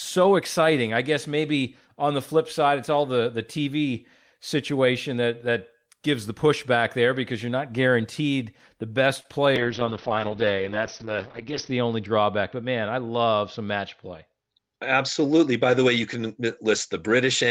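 At 9.20 to 9.26 s there is a short concealed packet loss: about 40 ms of the call arrived too late to decode, and the receiver synthesised roughly 36 ms by extending the preceding speech before crossfading back, heard as a brief smear.

From 9.57 s to the end, a call bitrate drop takes the encoder from 32 to 7 kbps, bottoming out for about 2.1 s. Audio bandwidth narrows from 20 kHz to 6 kHz, so the speech turns muffled and coarse, with a watery texture.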